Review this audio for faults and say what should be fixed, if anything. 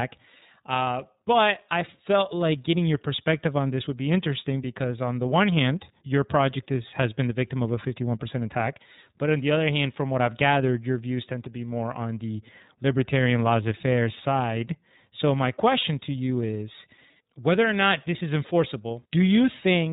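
The whole clip carries the iLBC codec. Speech is band-limited with nothing above 4 kHz, and it sounds plainly rough and synthetic. This fits the 13.33 kbps, 30 ms frame mode. To prevent it, use a wideband codec such as Opus at a higher bitrate.

At 15.80 to 15.85 s, just before "to you is whether", there are lost iLBC frames. The decoder repeats the last pitch cycle, giving a brief buzzy held vowel. This is consistent with one dropped 30 ms frame, and the speech recovers immediately. To prevent it, add jitter buffering, forward error correction or redundancy on the network path.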